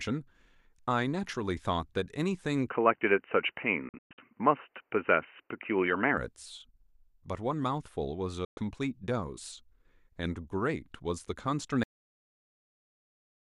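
At 2.70 s the speech turns dull and boxy with no gap. Nothing above 3 kHz survives. The level shifts by a few decibels, and a faint new background noise appears far below the speech. This is likely an input switched to a poorer device. Full bandwidth returns at 6.18 s.

Inside that stretch, at 3.89 s, a digital broadcast dropout begins. The receiver mutes several times over about 290 ms, losing about 216 ms in total. The longest hole lasts 120 ms. Each cut fades in about 3 ms. A second dropout at 8.45 s silences 120 ms.

At 11.83 s the speech has a cut-off end. It stops mid-sound and falls straight to digital silence with no natural decay. The final buffers were never written, so the rest of the clip is empty.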